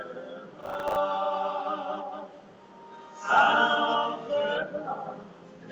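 From 0.61 to 0.96 s the processor falls behind and misses a run of buffer deadlines, the pattern pointing to buffers of around 10 ms and something like twenty misses. Each missed slot is filled with a repeat of old audio, spliced in with hard edges. The result is processor overload crackle: a gritty, tearing burst laid over the sound for about a third of a second, ending once the load eases.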